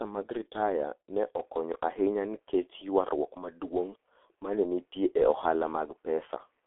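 The speech passes throughout through the G.723.1 codec, a low-rate telephony coder that works in 30 ms frames and rebuilds the voice from a slowly updated model. The heavy coding damage and the narrow line band, from 300 Hz to 3.5 kHz with nothing above 3.8 kHz, fit its 6.3 kbit/s mode. The voice comes out muffled and hoarse, with smeared consonants and no air or sparkle at the top.

From 1.40 s, right after "mag ritaya ne", the sound changes in a way that points to the input having likely switched to a poorer device, such as a second microphone or a headset in call mode. There is no gap at the switch and the level stays about the same, but the top end now stops at 3.4 kHz, so the voice turns duller and boxier. A faint new noise floor, roughly 50 dB under the speech, sits beneath it until the end.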